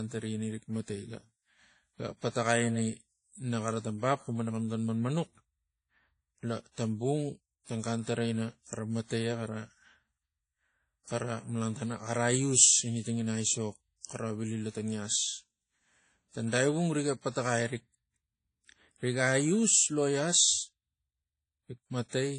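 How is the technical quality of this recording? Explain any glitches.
Technical quality is limited by audible codec damage throughout, plus two brief pre-echo events.

Across the whole recording there is a ringing, washy texture with hiss that rises and falls with the speech, and nothing above 10.1 kHz. This is likely WMA compression at a low bitrate, around 32 kbps. The transform coder spreads quantisation noise over long blocks and discards weak spectral detail.

At 14.00 to 14.05 s, just after "aius ina tangina aisok" and before "xara vili lo tang", and again at 17.30 to 17.34 s, right after "daivung riga", there is pre-echo. A short hiss of about 43 ms and 42 ms leads into a softened attack. The block's noise, sized for the loud onset, smears into the quiet moment before it.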